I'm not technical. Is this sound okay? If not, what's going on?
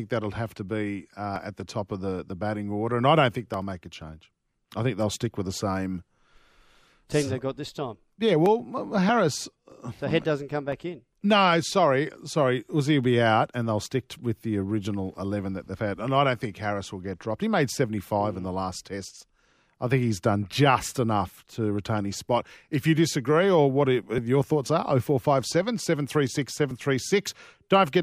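No. Between 9.72 and 11.23 seconds there are about four evenly spaced ticks, one every half second. These are periodic USB or driver dropouts: something on the computer briefly stalls the audio connection, and each time roughly a millisecond of speech drops out to silence.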